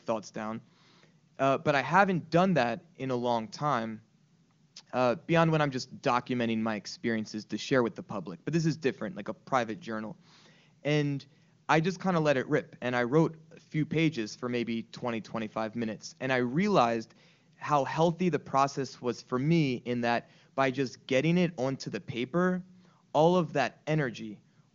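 No technical faults can be heard in this recording.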